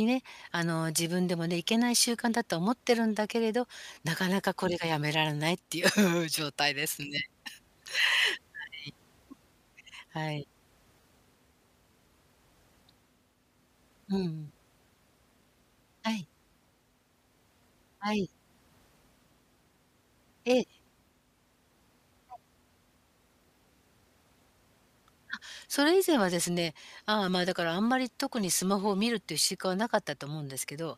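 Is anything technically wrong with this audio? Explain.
Yes, the speech has two brief dropouts. Lost LE Audio frames occur at 3.94 s and 11.01 s, each a gap of about 30 ms, which fits three consecutive 10 ms frames going missing over the Bluetooth link. The LC3 decoder covers the gap by replaying the last spectrum it received with scrambled phase, so each moment sounds like a short, hissy smear where the voice loses its clear tone before snapping back. The faint grainy edge in the high end is likely just the LC3 codec itself.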